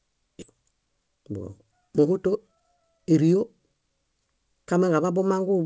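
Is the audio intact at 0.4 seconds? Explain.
No. At 0.42 to 0.44 s playback jumps forward with no gap, about a second of speech missing: a skip ahead, where queued audio was dropped.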